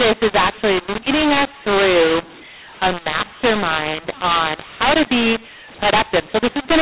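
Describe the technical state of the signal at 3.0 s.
At 3.0 s you're hearing the mu-law and A-law mix-up, which runs through the whole clip. The speech was coded as A-law G.711 telephone audio, band-limited below 4 kHz, but it's being decoded as mu-law, so every 8-bit code maps to the wrong level. Some samples come out too loud and others too soft, which makes the speech harsh and gritty. The quietest samples get pushed well above silence, so gaps fill with a noisy hash.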